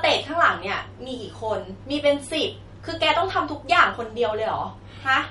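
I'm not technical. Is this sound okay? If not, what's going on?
No. Throughout the clip, the speech sounds watery and swirly, and the crisp top end is missing. Nothing is heard above about 11.2 kHz, so s sounds lose their sparkle and can chirp. The likely cause is MP3 compression saved at a low quality setting. To save space, the encoder cut off the highest sounds and dropped quiet details. Those details flicker in and out, which causes the swirling.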